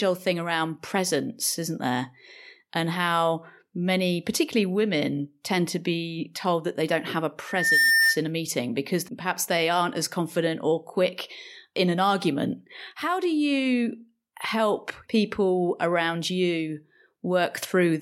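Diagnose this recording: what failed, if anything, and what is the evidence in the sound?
Loudspeaker feedback squeal in the analogue mic-speaker loop: after "they don't have a" (7.47 to 8.19 s), loop gain exceeds one at 1.8 kHz, swelling above speech as a bright horizontal spectrogram line.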